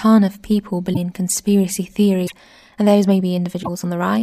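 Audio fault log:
0.93–0.97 s, 2.26–2.33 s, 3.62–3.69 s: broken MP3 bit reservoir. The first falls between "of people" and "in conspiracy", the second just after "in conspiracy". Each brief skip jumps the audio ahead, in a stream of 26 ms frames. The likely cause is lost frames, so later frames decode borrowed bits from the wrong data.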